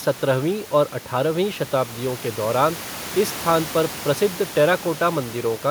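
Speech with no technical faults; the room noise sitting about 18 dB below the speech belongs to the recording space, not the system.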